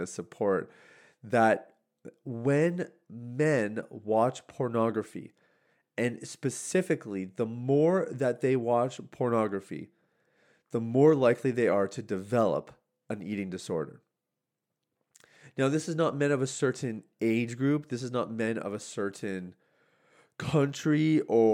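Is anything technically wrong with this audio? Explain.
No, nothing is technically wrong with this audio.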